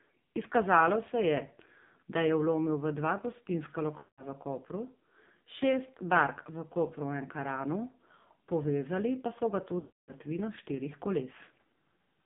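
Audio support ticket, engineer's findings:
AMR narrowband mobile codec, whole clip: low AMR-NB mode, consistent with about 5.9 kbps. Heavy codec damage. Band limited to roughly 150 Hz to 3.7 kHz, so the top end is gone. Few pulses per subframe make the speech buzzy and synthetic.

Lost AMR speech frames, 3.98–4.24 s: radio errors failed frame checksums; the decoder repeated the last pitch and vocal-tract settings at falling gain. Sound smears and fades toward silence over about 200 ms, consistent with ten 20 ms frames. Weak, rough recovery.

Lost AMR speech frames, 9.80–10.14 s: longer run of failed frames, about 280 ms, consistent with fourteen frames. Same concealment: stretched, decaying sound fading out, then weak, rough onset on return.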